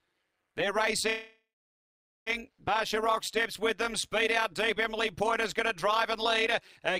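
Overlap-add ripple runs through the whole clip. The sound was split into windowed frames and reassembled with an overlap whose windows do not add up to a constant gain, so the level swells and dips once per frame. Here the level swings by about 11 dB at a rate of around 200 Hz. At that speed the pulsing reads as a metallic buzz with extra tones around each note laid over everything.

A call audio freeze runs from 1.09 to 2.29 s. The sound stops and its last moment is stretched into a fading buzz or hiss, which then gives way to roughly 0.83 s of silence. The likely cause is packets held up in transit until the jitter buffer ran dry. When the audio resumes, it picks up where it stopped, so nothing is lost, but everything after it plays about 1.17 s late.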